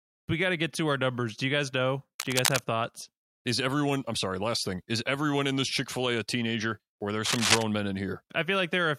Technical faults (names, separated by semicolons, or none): cable scratch noise